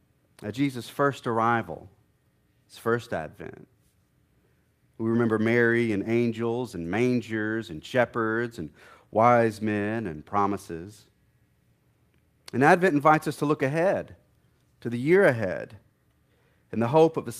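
No technical faults can be heard anywhere in the recording.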